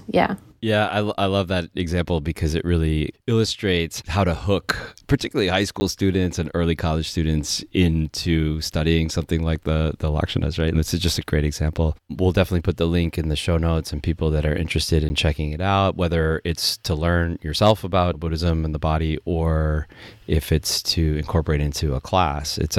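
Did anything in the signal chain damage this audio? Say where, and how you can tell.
Yes, at the driver or buffer stage. Two blocks of digital silence, each 10 ms long, sit at 5.80 s and 15.09 s in this speech. The gaps point to the output buffer not being filled in time, so the missing stretch went out as zeros. Because the signal drops straight to zero and returns with no fade, each block is heard as a short tick or click rather than a clean pause.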